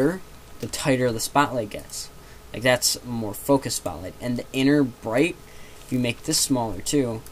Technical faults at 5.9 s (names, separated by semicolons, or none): block size mismatch (padded)